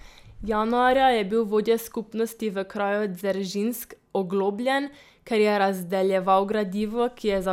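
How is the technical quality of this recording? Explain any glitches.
No technical faults are audible anywhere in this speech recording, so there are no glitches to explain.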